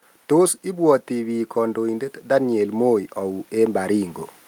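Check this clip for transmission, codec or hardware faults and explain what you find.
There's one fault: automatic gain rising from 0.29 to 4.21 s. The gain control heard a quiet input and crept up by about 8 dB, so the speech and background noise swell together.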